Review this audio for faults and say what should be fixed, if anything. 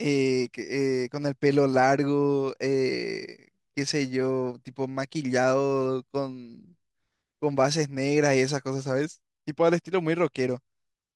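No faults turned up in this review, so nothing needs to be fixed.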